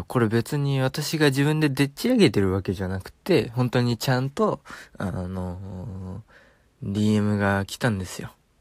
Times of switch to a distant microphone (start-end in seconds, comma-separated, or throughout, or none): none